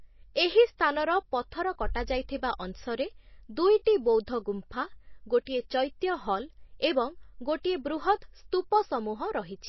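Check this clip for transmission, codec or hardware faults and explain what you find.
Two codec faults are audible in the speech.

Throughout, the top end is missing above 5.8 kHz and the sound is plainly watery, the likely result of MP3 compression, consistent with about 24 kbps, where weak frequency lines drop out.

At 5.45 s, pre-echo: quantisation noise spread across the block smears about 16 ms of hiss ahead of a sharp attack, softening it.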